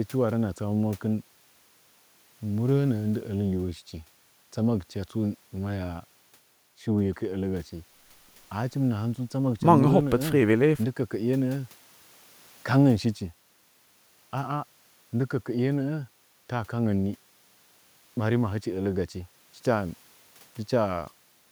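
No technical faults are audible.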